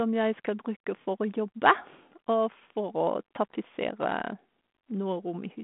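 No technical faults are audible.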